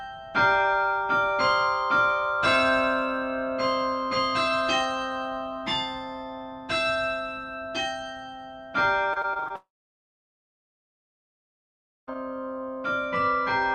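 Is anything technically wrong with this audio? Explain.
Yes, there are two network-related problems near the end.

From 9.13 to 9.52 s there's repeated packet loss, the robotic-sound kind. Over that stretch about half a dozen short holes open up, none longer than roughly 24 ms, and each one gets papered over by stretching the last bit of audio. About a third of the stretch is patched rather than real, so it comes out choppy, with small pieces missing.

Right after, from 9.56 to 12.09 s, the audio drops out for about 2.5 s. There's a brief carry-over of the last sound, then close to 2.4 s of silence before the audio comes back, with everything in between gone. That pattern points to a long network dropout as the likely cause, with the receiver filling in briefly and then giving up until packets arrive again.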